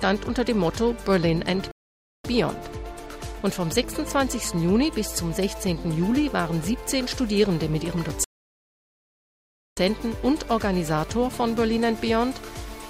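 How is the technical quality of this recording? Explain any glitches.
Two rebuffering stalls break up the playback. The first runs from 1.71 to 2.24 s, a gap of about 0.53 s, and the second from 8.24 to 9.77 s, about 1.53 s long. Each time, the player exhausted its downloaded audio and halted until more data arrived. The sound drops abruptly to silence, then picks up at exactly the point where it stopped, so nothing is skipped, but the gaps stretch the timeline by roughly 2 s overall.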